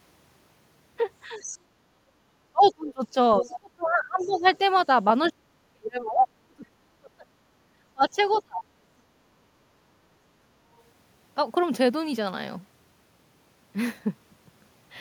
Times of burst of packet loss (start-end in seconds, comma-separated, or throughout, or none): none